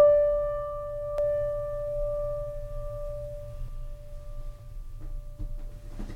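A music clip with two faults. From 1.18 to 3.68 s a doubled audio track plays, an equally loud, uncoloured copy trailing by roughly 0.7 s, likely from a second capture path; the spectrogram shows every event repeated, starting and stopping abruptly. At 4.59 s a block of digital silence lasting 2.18 ms cuts in, heard as a tick, visible as a flat notch with sharp edges.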